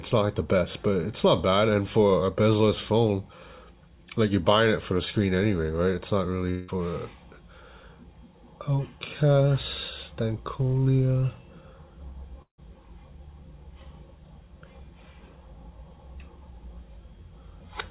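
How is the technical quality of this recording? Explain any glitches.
The recording has two audible gaps, on a narrowband call path that stops at 4 kHz. Both are likely long network dropouts. At 6.50 to 6.70 s, about 0.18 s is lost and filled with a fading buzz. At 12.42 to 12.60 s, the buzz fades into near silence. The receiver stretches the last sound, then resumes without the lost part.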